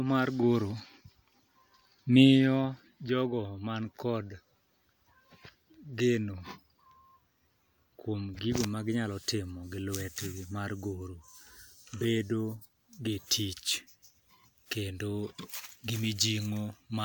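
No technical faults can be heard anywhere in this speech recording.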